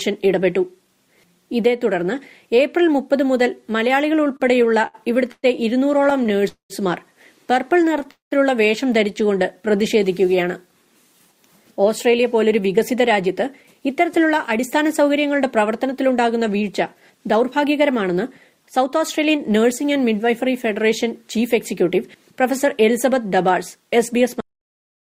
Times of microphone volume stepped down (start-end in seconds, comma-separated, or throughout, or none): none